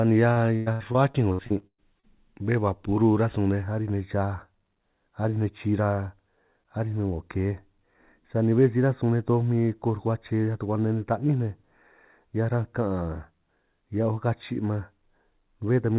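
Speech, and from 0.32 s to 2.05 s it breaks up with repeated packet loss (robotic sound): about ten short holes, the longest near 110 ms, are patched by stretching the preceding sound, so roughly a third of that stretch is synthetic. The recurring repetition sets it apart from a single clean dropout. From 3.62 s to the end, channel delay (comb filtering) makes the sound hollow and phasey. A tiny offset, on the order of 0.15 ms between channels, summed to mono cancels a fixed band around 3 kHz. That steady notch inside the call's 4 kHz band, rather than a smooth high-frequency roll-off, distinguishes it from the codec's own band limit.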